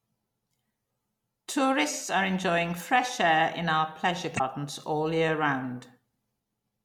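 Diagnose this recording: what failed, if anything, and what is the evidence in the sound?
The failure is in the codec stage: damaged data in a compressed stream. After "air in our pleasure", a brief glitch runs from 4.35 to 4.41 s before "all year". The decoder misreads corrupt frames and resyncs, leaving a visible discontinuity in the waveform.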